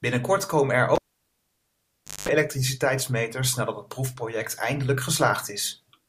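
Speech with a cable pulled and plugged in at 0.95 s: pop, about 1.28 s near-silence, a 0.2 s burst of 50 Hz mains buzz, another pop as sound returns at 2.29 s.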